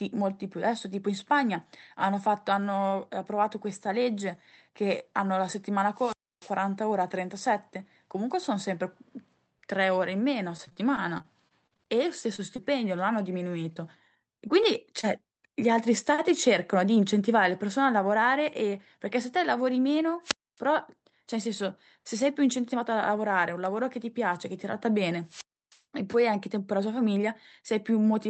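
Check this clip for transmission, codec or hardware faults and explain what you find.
Three kinds of fault are audible: wireless squelch dropouts, a stretch of repeated packet loss, and three short concealed packet losses. They sit over a call path whose top end stops near 8 kHz, which fits Opus at about 32 kbps.

Wireless microphone squelch dropout occurs at 5.93–6.56 s, 20.22–20.60 s and 25.24–25.81 s. Each time the FM signal fades and the receiver's squelch closes. Hiss rises, then the output falls to near silence for 0.26–0.31 s before the speech returns.

Repeated packet loss (robotic sound) runs from 10.57 to 12.60 s. Over a dozen late or lost packets, the longest gap 41 ms, are patched by extending the preceding sound, about 14% of the span. The speech turns choppy, with fragments missing.

Short concealed packet loss occurs at 13.74, 14.48 and 15.01 s, each spanning about 0.04 s. 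Roughly 20 ms of audio never arrived, and the decoder bridged it by continuing the prior waveform before blending back. Each is heard as a brief smear or wobble.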